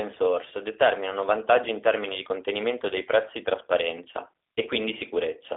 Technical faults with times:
0.00-5.56 G.729 codec

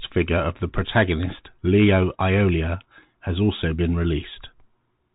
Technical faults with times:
0.00-5.14 Bluetooth CVSD headset codec

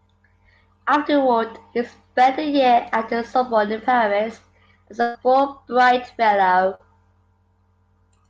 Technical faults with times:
5.01-5.17 burst of packet loss
6.75-6.81 short concealed packet loss

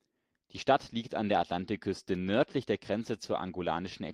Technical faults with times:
none

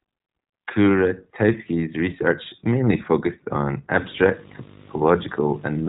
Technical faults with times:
0.00-5.88 iLBC codec

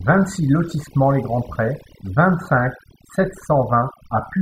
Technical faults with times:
0.00-4.41 overdone noise removal

